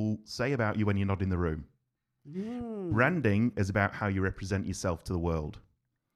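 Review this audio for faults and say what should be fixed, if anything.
Nothing needs fixing, as the speech signal shows no technical fault anywhere in the recording.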